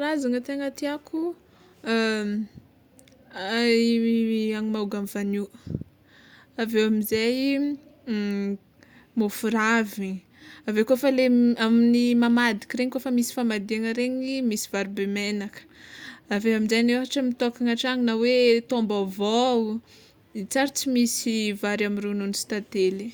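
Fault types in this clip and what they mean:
Nothing stood out on listening to this speech recording.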